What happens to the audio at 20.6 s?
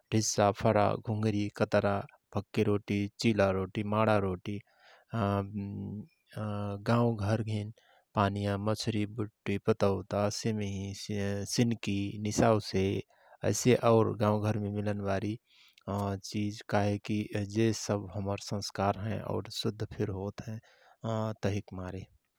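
Nothing goes wrong at 20.6 s; the speech there runs on intact, with no dropout, click, distortion or other fault at that moment.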